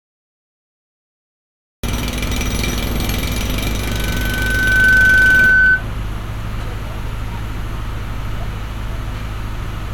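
A recording of everyday sounds with a cut-off start: nothing but digital silence until 1.83 s, when the sound jumps in mid-event with no natural attack, as if capture began late. Then from 3.79 s to 5.84 s there's a loudspeaker feedback squeal, a single 1.5 kHz tone swelling over about a second to roughly 10 dB above everything else as the mic picks up its own speaker and the loop runs away.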